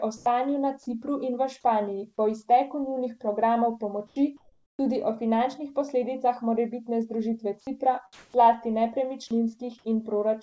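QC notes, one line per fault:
0.17–0.26 s, 4.37–4.79 s, 8.13–8.34 s: comfort noise in place of the background. The real background becomes flat, featureless hiss, likely from discontinuous transmission. It is about 3 dB louder, then about 7 dB quieter, then about 21 dB louder. On the spectrogram these show as smooth, uniform noise blocks with abrupt level steps at their edges.
4.07–4.16 s, 9.28–9.31 s: sound dropped by the voice detector. Just after "po izteku njunih programov", 60 ms of sound gives way to steady noise, likely because the detector judged it background. At 9.28 s a further 20 ms is lost. The waveform shows speech energy abruptly flattening into low uniform noise.
4.77–4.79 s: onset clipped by the voice detector. The 20 ms before "tudi o finančnih posledicah" is replaced with noise, likely because the detector reacted late. The first word starts abruptly. The waveform shows a hard vertical attack with no ramp, and the spectrogram shows no band energy above 8 kHz anywhere, which fits the G.722 call codec.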